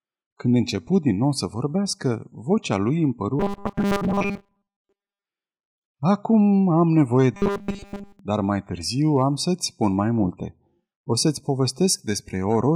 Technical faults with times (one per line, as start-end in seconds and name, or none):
3.40-5.25 robotic sound from repeated short buffers
6.81-7.17 hard clipping
7.34-8.19 robotic sound from repeated short buffers
9.16-9.23 hard clipping
9.84-9.86 hard clipping
12.51-12.55 hard clipping